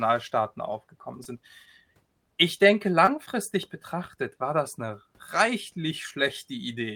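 Brief smears at 1.23 to 1.27 s and 3.05 to 3.09 s are short concealed packet loss: 20 ms went missing each time, so the decoder extended the preceding sound to bridge the gap.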